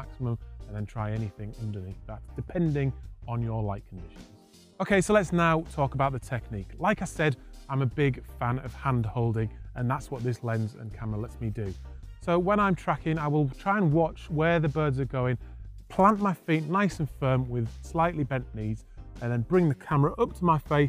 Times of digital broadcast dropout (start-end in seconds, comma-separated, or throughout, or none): none